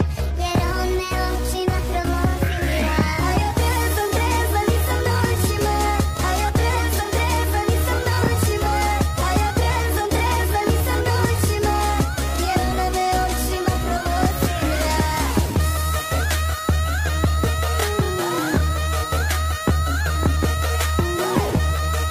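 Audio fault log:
No technical faults can be heard anywhere in the audio.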